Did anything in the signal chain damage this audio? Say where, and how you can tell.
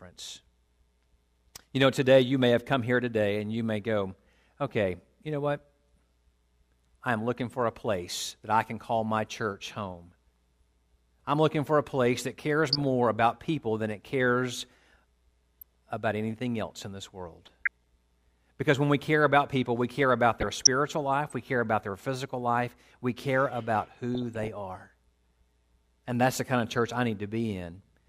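Yes. The damage happened at the DAB receiver's MP2 decoding stage. Bursts of burbling sit over the speech at 12.68–12.82 s (after "for a place that"), 15.61–15.75 s (before "about anything else in"), 17.43–17.82 s, 20.37–20.67 s and 24.15–24.48 s (after "life we care about"). This is DAB burbling. With weak reception, a residual bit-error rate of a fraction of a percent gets past error correction. Corrupted samples then put short noise blips in individual sub-bands, and corrupted scale factors make sub-bands leap in level for up to a frame.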